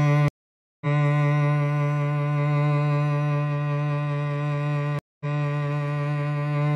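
Two stream reconnects break up the music. At 0.28 s the audio drops out for about 0.53 s, then picks up roughly half a second further on, so a chunk is skipped. At 4.99 s there's a shorter 213 ms gap, and it resumes 464 ms earlier, so you hear a stretch again. Each time the connection fell over and a fresh decoder restarted mid-stream, with the first frame fading in on the way back in.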